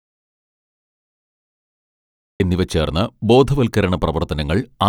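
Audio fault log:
0.00–2.40 s, audio dropout to silence: the input was likely lost while silence kept being written, so the clip opens in total silence, without room tone, until "എന്നിവ ചേർന്ന്".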